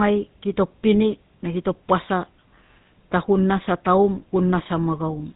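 From the first second to the last, the speech carries the character of the GSM full-rate codec. The voice is rebuilt from a vocal-tract model excited by a sparse, evenly spaced pulse train, and nothing survives above 4 kHz. The damage is plainly audible: a buzzy, gravelly roughness sits on every voiced stretch, and the top end is dull, consistent with a 13 kbps full-rate channel.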